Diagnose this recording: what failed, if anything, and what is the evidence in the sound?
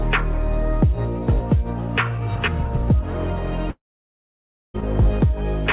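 The network stage failed, most likely as a long network dropout. From 3.70 s to 4.76 s no new audio plays. The last sound is stretched into a brief fading buzz, and then about 0.95 s of near silence follows until the audio resumes at 4.76 s with the missing stretch simply gone. On a waveform this is a short decaying tail and then a flat line. On the spectrogram, which is band-limited to 4 kHz as expected for a G.711 call path, it shows as a blank vertical gap.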